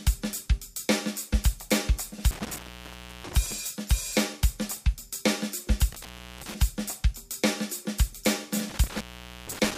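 The audio suffers from intermittent contact, likely a loose cable or plug. The signal drops out three times, around 2.31 to 3.52 s, 5.92 to 6.54 s and 8.70 to 9.78 s. The line stays open for 0.66, 0.36 and 0.47 s. Each gap has crackle at its edges and faint hiss inside.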